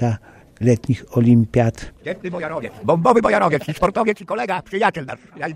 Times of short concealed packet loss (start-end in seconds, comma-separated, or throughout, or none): none